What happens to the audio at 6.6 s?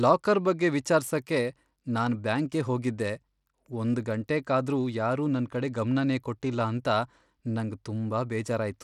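At 6.6 s the speech carries the same damage heard throughout: treble that flickers and drops out, with gritty noise and aliasing riding on it. This is likely Bluetooth SBC compression, which fits a low bitrate near 96 kbps, where SBC's few fixed sub-bands starve the weak upper bands of bits. Unlike a clean low-pass filter, the top end comes and goes, and the graininess sits across the whole band.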